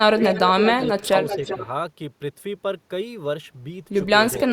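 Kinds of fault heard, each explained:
Speech suppressed in double talk: The speech dips abruptly in short pieces, at 0.12 to 0.21 s, 0.87 to 1.14 s and 1.37 to 1.66 s, falling by roughly 10, 15 and 5 dB at its deepest. The likely cause is both sides of the call talking at once, so the echo canceller could not tell this talker from loudspeaker echo and turned everything down together.
Echo leak: A delayed, fainter copy of the speech trails the original by a steady 0.39 s or so, in stretches at 0.24 to 0.40 s, 0.63 to 1.05 s, 1.26 to 1.58 s and 4.34 to 4.40 s. It is strongest near the start, about 5 dB below the speech, and elsewhere sits about 10 to 15 dB down. This is likely an echo canceller at a loudspeaker end passing some of the picked-up sound back.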